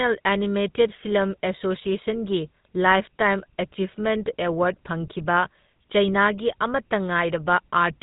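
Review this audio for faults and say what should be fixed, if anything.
GSM full-rate codec damage runs throughout. A vocal-tract model driven by sparse, regularly spaced excitation pulses gives the speech a plainly audible buzzy, gravelly roughness. Nothing passes above 3.8 kHz, and the sound fits a 13 kbps full-rate encode. To fix it, capture or transmit the speech through a wideband codec, or uncompressed, instead of the GSM full-rate path.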